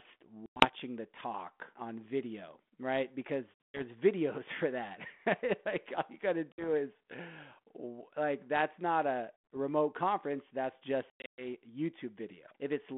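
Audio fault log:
0.46–0.66 s, 3.54–3.81 s, 6.52–6.66 s, 9.37 s, 11.1–11.46 s, packet loss on an ADPCM call: hard-edged silent gaps from 60 to 240 ms, some broken into scattered runs. Afterwards the decoder's predictor and step size are out of step with the sender's, so the speech returns slightly distorted before settling.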